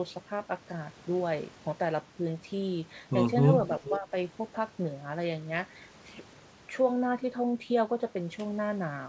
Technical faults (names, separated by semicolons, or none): echo leak; speech suppressed in double talk